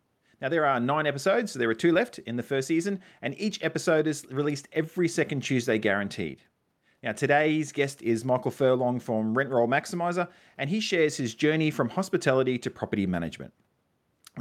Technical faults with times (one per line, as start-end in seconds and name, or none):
none